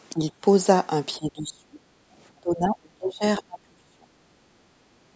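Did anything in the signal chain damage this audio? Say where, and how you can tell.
Yes. Speech suppressed in double talk occurs at 0.13–0.22 s, 1.18–1.8 s, 2.31–3.24 s and 3.4–4.1 s. The voice dips by roughly 10 dB in the first spot and by 25 to 35 dB later. The stage is call processing. The likely cause is the echo canceller meeting simultaneous far-end audio, failing to separate the local talker from loudspeaker echo, and ducking both.

The other side's voice leaking through appears as a brief scrap at 3.26 s, about 40 ms long and sitting roughly 25 dB under the talker. That detached fragment between two suppressed stretches likely comes from loudspeaker playback that the same echo canceller did not fully subtract from the microphone signal, so residual far-end sound slipped past into the outgoing path.

Background gated by the echo canceller runs from 4.38 s to the end of the clip, where the room tone sinks by about 7 dB for roughly the last 0.7 s instead of holding steady. 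This is the canceller's suppression clamping the microphone while the loudspeaker played, and it does not release before the audio stops. The call path's band limit, with nothing above 8 kHz, is expected and is not part of the damage.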